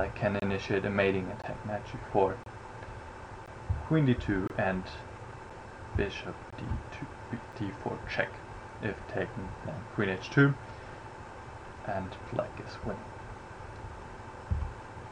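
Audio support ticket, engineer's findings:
Segment timestamps misaligned, player pads the gap with silence: gap between stream segments. Hard-edged dropouts of 6 to 27 ms at 0.40–0.42, 1.42, 2.44–2.46, 3.46, 4.48–4.50, 5.50, 6.50–6.53, 7.52 s, roughly every second, which fits 1 s segments.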